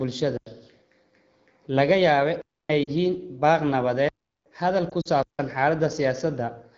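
A speech recording carried over the AMR wideband (HD Voice) codec, whose clarity fits a rate of 12.65 kbit/s or higher, shows two faults. In the first, the playback program failed to fill its output buffer in time, so blocks of samples came out as zeros, each a block of digital silence. The sound drops out abruptly and returns at 0.37–0.46 s (93 ms, which fits a 4096-sample buffer), 2.42–2.69 s (279 ms), 4.09–4.46 s (372 ms, consistent with a 16384-sample block) and 5.23–5.39 s (159 ms). In the second, radio errors corrupted speech frames, and the decoder bridged them by reusing its last good pitch and vocal tract settings at reduced gain. These lost AMR speech frames cost about 40 ms of audio at 2.83–2.90 s, where the sound drops to near silence, and about 60 ms scattered across 4.89–5.09 s in runs of up to 40 ms, where the sound wavers and briefly turns rough as it recovers.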